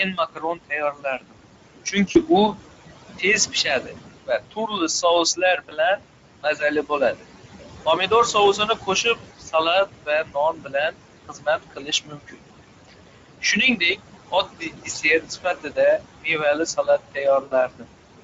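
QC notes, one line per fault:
QC notes, one line per fault:
Throughout: noise suppressor artifacts. The room noise sits only about 9 dB below the speech, and the suppressor pulls it down by about 20 dB between phrases and lets it back up under them. That pumping floor sets it apart from a fixed noise gate or a plain filter.
Throughout: Speex codec. At around 16.8 kbps this CELP codec leaves the speech hoarse and grainy, with a noise-like sheen on the upper band in place of real detail. The roughness rides on every syllable, unlike suppressor warble, which lives in the background.
0.12–2.54 s and 3.18–17.89 s: speech cut by the noise suppressor. Soft consonants, word endings and quiet stretches are taken for noise and pushed down by as much as about 22 dB, roughly a second of audio in the first span and about four seconds in the second. They sound swallowed. This differs from dropouts because the loud parts stay intact.
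2.11–2.18 s, 5.69–5.74 s, 17.43–17.53 s: VoIP packet loss concealed by the speech codec. The decoder fills gaps of 40, 20 and 80 ms by repeating its last pitch and filter, so the sound stretches into a buzzy, fading tone rather than falling silent. The speech stays weak briefly after each gap as the decoder recovers.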